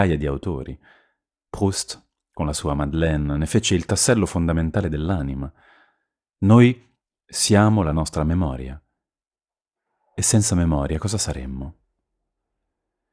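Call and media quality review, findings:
No technical faults found in the speech signal; level, continuity and timing hold steady throughout the recording.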